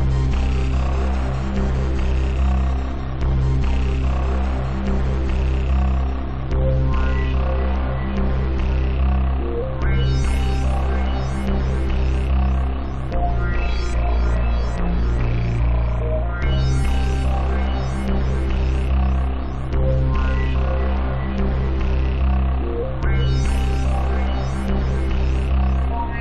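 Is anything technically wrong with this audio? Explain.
No, the signal holds steady throughout, with no technical faults to be heard.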